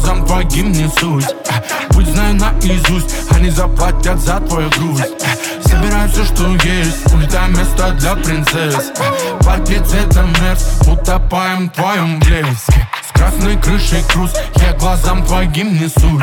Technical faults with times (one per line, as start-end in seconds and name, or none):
none